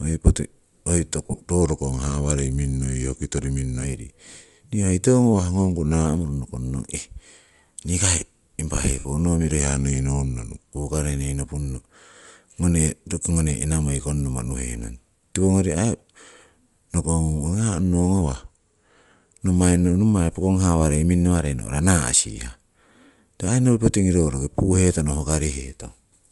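Throughout the speech there is a breathy, grainy edge, and the upper band sounds thinned and noise-filled. This is likely Bluetooth LC3 compression at a low bitrate, around 48 kbps with 7.5 ms frames. The codec damage is plainly audible.

From 1.26 to 1.40 s come lost LE Audio frames. About 90 ms of audio drops out, scattered over 135 ms, with the longest gap about 40 ms. The decoder repeats the last spectrum with scrambled phase, so the speech smears into noise.

At 1.62 s a drift correction step, probably from clock-matching software, slows playback by 6.5 percent. Pitch drops 116 cents, a little over a semitone, and snaps back at 3.84 s. The same detuning returns from 5.33 to 6.06 s.

From 8.99 to 9.05 s, just before "noh miro", another 60 ms of lost frames blurs into noise.

Just after "noh miro", the slowed, flattened speech returns from 9.60 to 10.67 s, and again from 18.21 to 19.34 s. 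Each time it is 6.5 percent slower and 116 cents lower, then snaps back.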